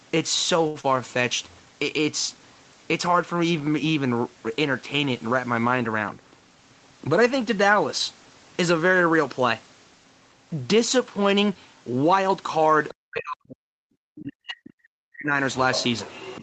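At 0.67 s the speech holds one sound too long, with a faint buzz or dip, then resumes where it left off. This is a short stall from a late packet. The packet missed its slot, the jitter buffer ran dry, and the receiver stretched the last sound for 72 ms until the packet arrived. Nothing is lost; the sound is only held, and the overall delay grows by that 72 ms.

Right after, from 0.81 to 0.86 s, there is a brief smear. This is short concealed packet loss. About 60 ms of audio never reached the decoder in time. The receiver bridged the hole with only 27 ms of synthesised continuation, carrying on the previous sound before blending back into real audio. That shortfall pulls the delay back by roughly 30 ms.

From 0.97 to 1.22 s the speech drags, slower but at the same pitch, with drawn-out sounds. This is a jitter buffer slow-down. To rebuild its reserve, the receiver repeated single pitch periods or bits of pause many times over. 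It added 39 ms in that stretch and ran playback at about 87% speed.

Between 6.36 and 6.88 s the speech sounds hurried, faster at unchanged pitch. This is a jitter buffer speed-up. The buffer was holding more audio than its target, so the receiver trimmed out short pieces of one or a few pitch periods repeatedly. It removed roughly 70 ms and played at about 113% speed to bring the delay back down.

From 12.88 to 12.94 s a faint second voice briefly comes through, about 20 dB below the main talker. It comes back from 15.73 s to the end of the clip, somewhat louder at about 15 dB down. This is the other side's voice leaking through. The likely cause is the far end's audio playing on the talker's loudspeaker and being picked up by the microphone, with the echo canceller failing to remove all of it.

Between these scraps, from 12.98 to 13.93 s and again from 14.15 to 15.34 s, the talker's speech dips sharply and in places nearly vanishes, falling by as much as about 40 dB. 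This is speech suppressed in double talk. Both sides were likely talking at once. The echo canceller could not separate the local voice from the loudspeaker echo, so it turned everything down, taking the wanted speech with it.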